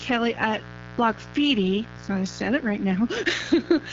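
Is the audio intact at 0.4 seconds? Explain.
No. At 0.4 s the speech carries two faults, both present from start to finish.

A mains buzz runs underneath at roughly 20 dB below the speech. It is built on 60 Hz, and its sharp switching spikes arrive twice per mains cycle, so the harmonic series climbs well into the kilohertz range. The result is a steady, raspy buzz rather than a smooth hum, and it does not drop out in pauses.

The speech also shows AMR wideband (HD Voice) codec damage. Nothing reaches above 7.2 kHz, and the top band sounds like shaped noise rather than real detail. The coder models the vocal tract and drives it with pulses, and at a low rate that model cannot track the speech closely. Here the roughness and grainy, raspy texture are plainly audible, which points to one of the lowest modes, around 8.85 kbit/s.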